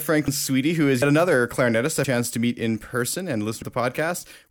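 A speech clip with four abrupt jumps where the sound skips ahead without any gap, at 0.28, 1.02 (between "who is" and "another clarinetist"), 2.04 (between "another clarinetist" and "to meet in") and 3.62 s. Each skips roughly a tenth of a second, the third nearly a third. These are likely dropped buffers (overrun), with unread audio overwritten and the two sides spliced together.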